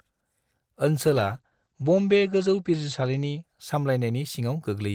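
Speech with a call bitrate drop from 1.07 s to about 4.15 s: the encoder's bit budget shrinks, which fits a fall from around 32 kbps to 12 kbps, so the sound turns coarse and watery and loses everything above 8 kHz, where it previously reached 20 kHz. The worst stretch lasts 1.77 s. Unlike a fixed low-pass filter, the dullness arrives with grainy coding artefacts and then lifts as quality recovers.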